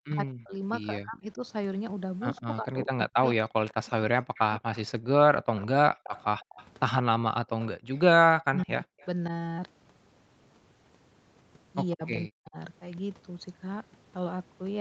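Speech that repeatedly dips, thins or breaks up in pieces, by up to about 40 dB, from 0.00 to 1.42 s, 2.41 to 5.71 s, 8.20 to 9.31 s and 11.94 to 12.57 s, is speech suppressed in double talk, likely an echo canceller that couldn't tell the talker from the far side's echo and turned both down. A faint delayed copy of the speech trails about 156 ms behind, at roughly 20 dB below it from 2.36 to 7.67 s and fainter around 9.0 s. This is an echo leak, likely from a loudspeaker whose echo canceller let some of its pickup return. At 7.78 to 7.89 s the room sound briefly drops by about 37 dB, which is background gated by the echo canceller as it clamped the microphone.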